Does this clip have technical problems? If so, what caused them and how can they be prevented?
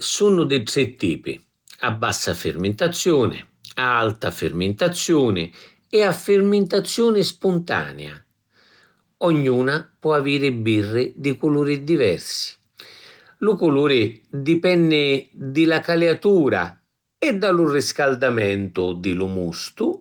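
No, no technical faults here.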